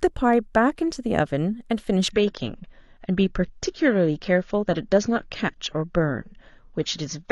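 From 2.11 s to the end, the speech abruptly turns dull and swirly, with nothing above 7 kHz and no gap at the switch. This is an adaptive stream at a lower bitrate: a slowed connection pushed playback onto a leaner encode, consistent with about 24 kbit/s.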